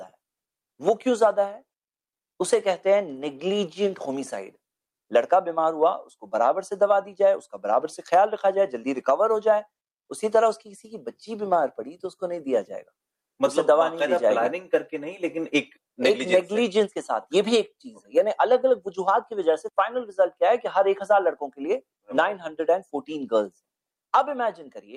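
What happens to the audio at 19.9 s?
Nothing goes wrong at 19.9 s; the audio there plays through intact, with no dropout, click, distortion or other fault.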